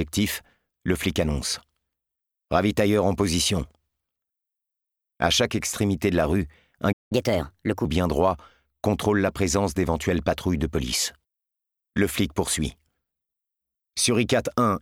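At 6.92 s the sound cuts out for about 0.18 s, a playback stall, likely the player starving for data or getting blocked, before resuming at 7.12 s. From 7.12 to 7.85 s there's catch-up at higher speed: the backlog runs 1.25 times fast, pitch rises about four semitones, then settles back.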